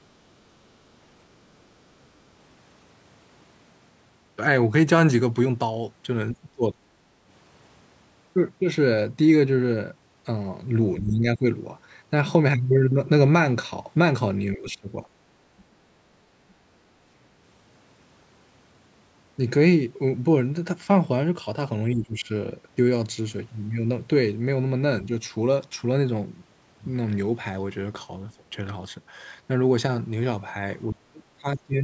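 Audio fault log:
6.33–7.1 s, 10.99–11.45 s, 14.55–14.89 s, 21.94–22.27 s, 28.37–28.43 s, 30.91 s to end: speech suppressed in double talk. The speech dips sharply or breaks up, most deeply at the end. The echo canceller likely turned it down while the far side spoke.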